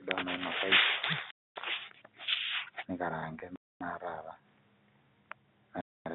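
Silence is inserted at every join between chunks of the stream rather than any sound being dropped. The first of these gaps between chunks runs from 1.31 to 1.56 s: a 250 ms hole in the speech, which then resumes intact. The spacing of the gaps fits chunks about 2 s long.

From 3.40 to 3.42 s comes packet loss with pitch repetition. A single 20 ms packet went missing, and the receiver filled it by repeating the last pitch period. Because the loss is so brief, the concealment never fades to silence. It comes across as a tiny held, slightly buzzy blip in the voice.

The chunk gaps return at 3.56 to 3.81 s and again at 5.81 to 6.06 s, each another 250 ms silence. The regular spacing gives the speech a stop-start rhythm. Through all of this the G.711 telephone coding holds the sound within the narrow line band of roughly 150 Hz to 3.7 kHz.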